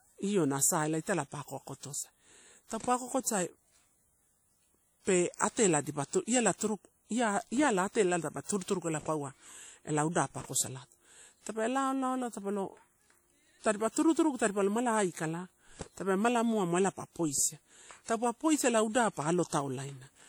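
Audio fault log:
Throughout, WMA compression: the speech rings and sounds washy. Hiss breathes with the signal. Likely long-block transform coding, fitting a bitrate near 48 kbps.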